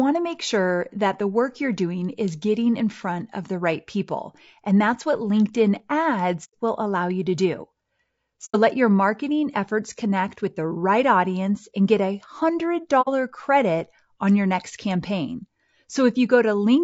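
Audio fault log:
throughout: low-delay AAC compression, likely; speech sounds rough and grainy, with noise between harmonics and a lowered or synthetic top band, pointing to a low bitrate near 32 kbps.
6.44–6.54 s, 8.45–8.56 s, 13.01–13.08 s: AAC frame loss with muting; soft-edged silent holes of about 90, 90 and 60 ms that fade out and in, unlike hard dropouts.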